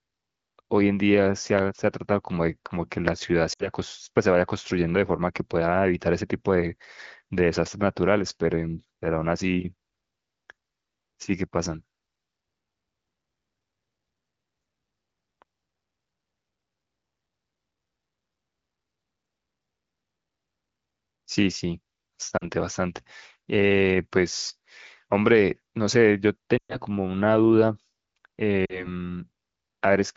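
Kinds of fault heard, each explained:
Lost AMR speech frames: When a radio frame fails its checksum, the AMR decoder repeats the last good pitch and vocal tract settings at falling gain. Here the speech briefly drops to near silence at 3.53–3.69, 22.37–22.49 and 28.66–28.88 s. Around 26.57–26.76 s it drops to near silence within two frames, which fits about 120 ms of missing audio. After each gap the speech returns rough for a moment against the clear wideband sound.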